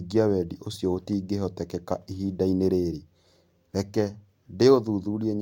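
No technical faults can be heard in this recording.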